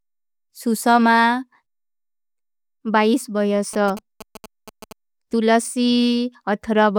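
A galloping dit-dit-dit of short buzzes cuts across this speech recording from 3.74 to 4.93 s, sitting roughly 15 dB below the voice. These are GSM signalling bursts: a nearby 2G phone's radio pulses, repeating at 217 Hz, are rectified by the audio circuitry into audible buzzes.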